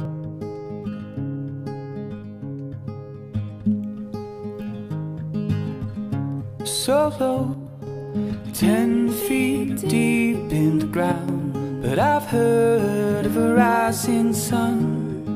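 Twice, what is likely one channel dropping out (a stereo channel lost before the mono sum) takes the level of the audio down abruptly by about 6 dB, from 7.54 to 7.87 s and from 11.12 to 11.29 s, then restores it unchanged.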